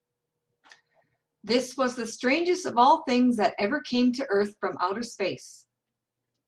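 Three brief patches of rough, noisier speech interrupt the clip without any gap: at 1.85 to 1.91 s, at 3.95 to 3.97 s, and at 4.99 s. Each is a lost packet rebuilt from error correction. The following packet carried a low-bitrate copy of the missing audio, and the decoder played that copy instead of silence. The first patch spans about 40 ms of rebuilt sound, which points to two lost packets. The later two are about 20 ms each.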